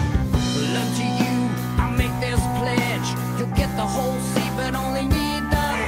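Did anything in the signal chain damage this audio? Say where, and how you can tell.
No, no stage in the chain left audible damage.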